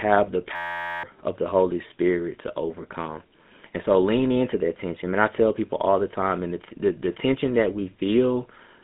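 Throughout the speech, a GSM full-rate codec leaves a gravelly, buzzy roughness and nothing above 3.8 kHz, with the line band running from about 150 Hz to 3.6 kHz. Its regularly spaced pulse excitation gives a grating edge rather than the smeared, watery artefacts of newer codecs, which fits a 13 kbps full-rate stream.

From 0.56 to 1.03 s a system hang loop replaces the speech with a steady buzz. The hardware keeps replaying one 11.61 ms fragment at 86.1 Hz, which fits a 512-sample buffer, and about half a second of audio is lost. Because the buzz is an exact repeat of real sound, it keeps that fragment's timbre and stops abruptly, where mains hum would be a clean tone.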